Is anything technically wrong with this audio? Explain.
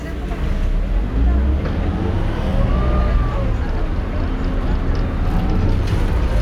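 Yes. At 1.83 s there is a single sharp click, most likely from dropped samples: a couple of samples, a tiny fraction of a millisecond, went missing, so the waveform jumps straight from one value to a later one. That step shows as a thin vertical line across the spectrum. Nothing audible is removed, which separates it from a dropout, where a stretch of sound vanishes into a gap, and its being one isolated click rules out ongoing crackle.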